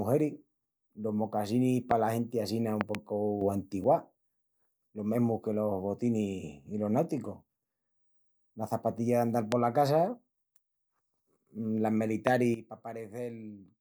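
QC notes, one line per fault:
1.91–1.93 s, loud pop: a sharp pop, roughly 20 dB above the speech, between "los mocasinis" and "genti assina", with the speech continuing underneath. Likely a voltage pulse such as static or a switch transient added to the signal.
2.81–2.97 s, loud pop: two pops in quick succession right after "genti assina", peaking roughly 20 dB above the speech. Likely a pair of electrical transients shaped and ringing briefly in the circuitry.
3.41–3.84 s, sudden gain jump: speech and background noise leap together by 6 dB without a fade. This likely comes from a digital gain change applied from one sample to the next with no ramp.
9.52–9.54 s, loud pop: a single sharp thump, roughly 20 dB above the speech, which carries on beneath it. Likely a voltage spike from a plug, switch or driver glitch.
12.27–12.29 s, loud pop: another single pop, roughly 20 dB above the speech. 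Likely a brief electrical pulse added on top of the signal.
12.54–13.80 s, sudden gain jump: speech and noise floor drop abruptly by 12 dB and stay down to the end. This likely comes from an unramped digital gain or bit-shift change.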